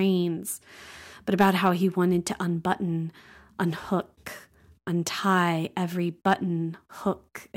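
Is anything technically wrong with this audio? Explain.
Yes. From 1.40 to 1.69 s the speech shows hard clipping: the level overdrives a stage by about 6 dB, so waveform peaks are sliced flat. Those flattened tops generate high harmonics, heard as crackle on the peaks there.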